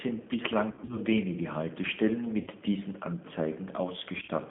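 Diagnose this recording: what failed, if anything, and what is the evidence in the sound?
G.729 codec damage is present throughout, at the codec stage. The speech is confined to a narrow telephone band of roughly 200 Hz to 3.5 kHz and sounds rough and synthetic. This fits 8 kbit/s G.729A, which rebuilds each 10 ms frame from a vocal tract filter, a pitch predictor and a few pulses.

VoIP packet loss concealed by the speech codec appears at 0.71 to 0.98 s, 2.41 to 2.49 s and 4.18 to 4.30 s. These sections turn stretched and fading as the decoder repeats its last pitch and filter at falling gain. The first sounds like about 110 ms lost in bursts over 180 ms, the last like 60 ms scattered over 100 ms. The speech stays weak briefly after each loss ends.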